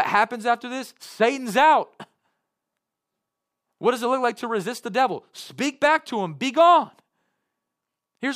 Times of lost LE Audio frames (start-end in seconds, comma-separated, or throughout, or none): none